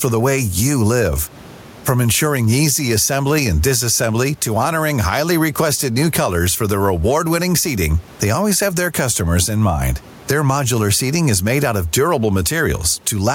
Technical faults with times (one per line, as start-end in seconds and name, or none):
0.00-13.34 gain pumping